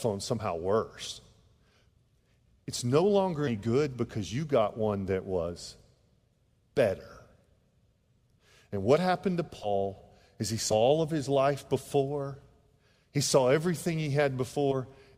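Compressed frames skipped at 2.09 s, 3.47–3.50 s, 9.63–9.70 s, 10.71–10.75 s and 14.71–14.76 s: the decoder drops whole chunks, consistent with 20 ms frames, so the speech jumps ahead by roughly 40 to 150 ms each time.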